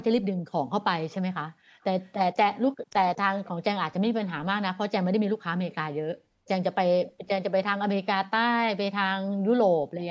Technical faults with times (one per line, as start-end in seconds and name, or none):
2.03-2.11 echo leak
2.83-2.87 background gated by the echo canceller
3.45-3.50 echo leak
7.07-7.12 echo leak